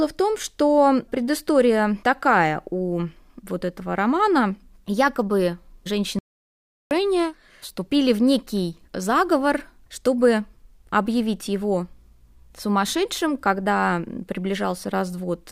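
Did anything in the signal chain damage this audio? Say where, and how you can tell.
Yes: audio dropout to silence, 6.19 to 6.91 s, likely a lost input link writing silence; waveform and spectrogram go fully blank, no room tone.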